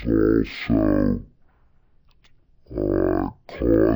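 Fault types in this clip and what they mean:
Stereo read as mono: Left and right samples are played in sequence as one channel. Speech runs at half speed throughout, an octave low, with a faint mirrored image high up.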